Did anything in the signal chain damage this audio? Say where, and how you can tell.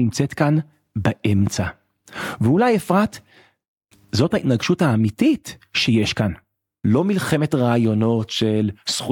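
No, nothing in this speech recording points to damage at any stage of the signal chain.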